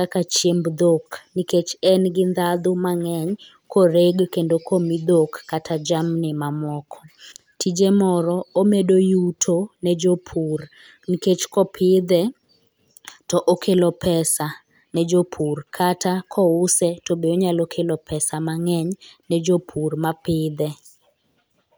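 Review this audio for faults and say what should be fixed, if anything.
Nothing stood out on listening to this speech recording, so there is nothing to fix.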